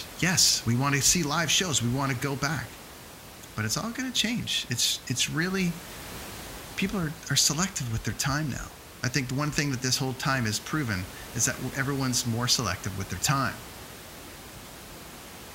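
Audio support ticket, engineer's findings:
No faults found on this speech clip, just some room noise sitting about 16 dB under the talker, which comes from the recording space and not the system.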